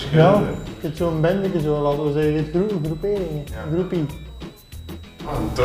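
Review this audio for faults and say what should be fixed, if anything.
A switching supply whistle runs throughout, a faint tone wandering between 3.75 and 4 kHz, roughly 35 dB below the sound, from a power supply's audible switching. On a spectrogram it is a thin, slightly wavering horizontal line near 4 kHz. Power the gear from a linear or well-filtered supply, or one that switches above the audible range.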